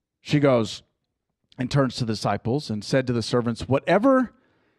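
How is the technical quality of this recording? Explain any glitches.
No glitches or faults detected.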